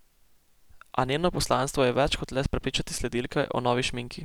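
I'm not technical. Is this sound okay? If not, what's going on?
Yes, no technical faults are audible anywhere in this recording.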